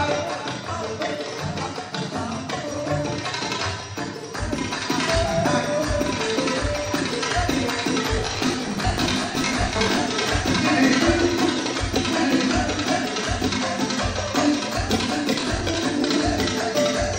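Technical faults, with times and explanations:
8.16–9.97 s, processor overload crackle: many of what sounds like roughly 10 ms buffers missed in a row, each refilled with stale audio, giving a gritty tearing instead of clean silent dropouts.
15.38–15.75 s, processor overload crackle: a shorter burst of the same repeated-fragment grit with hard edges at each missed buffer, ending abruptly once the load eases.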